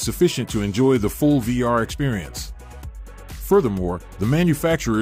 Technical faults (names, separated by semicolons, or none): none